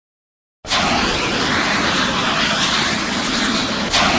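Throughout, a wrong sample rate plays the sound at half speed and an octave lower, fitting 32 kHz material read at 16 kHz. A spectrogram shows halved frequencies and doubled durations.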